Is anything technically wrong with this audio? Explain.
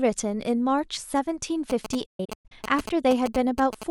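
Yes. Two faults affect this speech recording.

From 1.70 s to 3.84 s there are GSM signalling bursts. A 2G phone close to the recording chain sends short groups of radio bursts while it signals, and the audio circuitry rectifies them into a galloping dit-dit-dit of short buzzes. The buzzes repeat at about 217 Hz, the GSM frame rate. They sit roughly 10 dB below the speech.

From 2.06 s to 2.52 s there is a digital broadcast dropout. The receiver discarded frames it could not decode and muted until valid frames arrived again. The silence comes as several short holes spread over about 450 ms. About 290 ms of audio is missing in total, and the longest single gap is 128 ms, which points to frames that each carry a few tens of milliseconds of sound. Each cut fades within about 8 ms, so the gaps sound like quick drop-outs rather than hard clicks.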